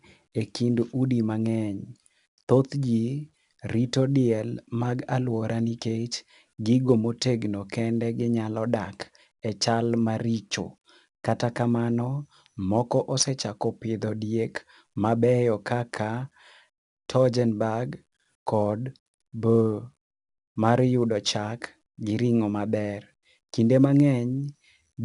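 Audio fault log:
Throughout: 4-bit ADPCM compression. Coarse 4-bit prediction steps leave gritty hiss tracking loud speech, and nothing above 10.7 kHz, which fits a sample rate near 22 kHz.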